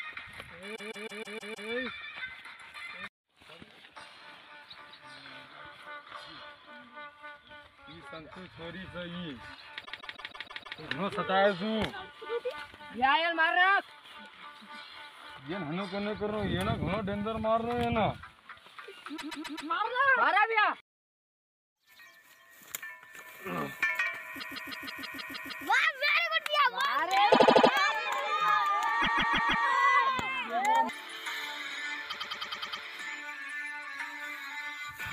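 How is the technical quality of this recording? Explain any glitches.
The recording is marred by eight stutters where a short stretch of sound loops several times before moving on.

These are repeated frames, heard at 0.75–1.69 s, 9.84–10.78 s, 19.16–19.69 s, 20.97–21.59 s, 24.39–25.64 s, 27.31–27.70 s, 29.01–29.64 s and 32.09–32.82 s. Each time, a block of about 78 to 157 ms replays four to eight extra times. The cause is a run of compressed frames written or delivered more than once, so the decoder simply plays the same slice again. Every stutter lengthens the audio by the repeated time, from about 0.39 s up to about 1.25 s in the longest one at 24.39 s.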